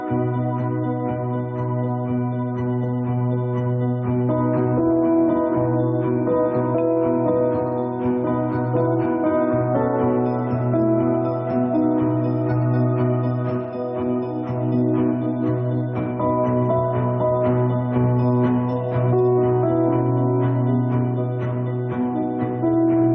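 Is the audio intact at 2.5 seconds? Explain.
No. Gain pumping runs through the whole clip, including 2.5 seconds. The level visibly breathes: the gain swings by roughly 5 dB each time a loud sound arrives, so loud and soft parts sit unnaturally close together and the sound feels squashed. The likely cause is gain set far too high for the microphone, with a fast limiter or compressor clamping down on every peak. The band stopping around 8 kHz is just the call's microphone processing.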